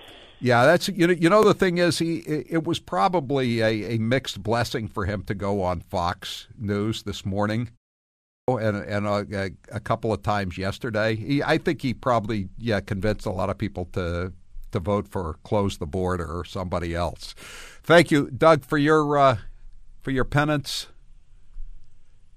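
At 8.21 s the speech comes back out of a short half-second pause with its opening cut away: the sound jumps in abruptly, with no natural onset, and about 270 ms is missing up to 8.48 s. This is a clipped start after a pause. The output device powered down or lost its lock during the silence and needed time to wake, so the first part of the returning sound was swallowed before playback resumed.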